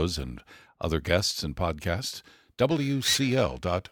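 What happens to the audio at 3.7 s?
Periodic clock jitter is present at 3.7 s, covering the stretch from 2.70 s through to the end of the clip. Interference is wobbling the converter's sampling clock at a steady rate of roughly 2 kHz, so every component of the speech picks up sidebands spaced about that far above and below it, more strongly for the higher-frequency content. The result is a rough, metallic edge riding on the speech that drops away in the pauses.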